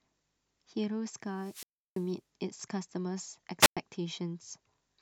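Wireless microphone squelch dropout at 1.33 to 2.14 s and 3.60 to 3.77 s: the radio link fades, hiss rises, then the receiver's squelch mutes the speech for 334 ms and 108 ms before it returns.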